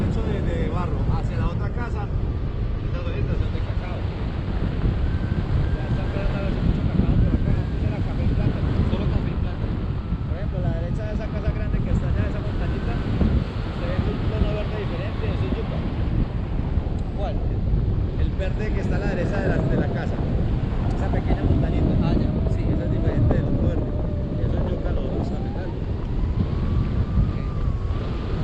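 For the first 4.0 s the audio sounds dull and smeared, with the treble either absent or replaced by a hissy, synthetic-sounding top end and stronger codec artefacts. At 4.0 s the quality jumps abruptly to a fuller, cleaner sound without any gap or dropout. This is an adaptive stream starting at a low bitrate: the player opened on a cheap encoding to begin playback quickly, consistent with Opus at around 16 kbit/s. Once it had measured the connection, it switched to a richer rendition, which fits Opus at 64 kbit/s.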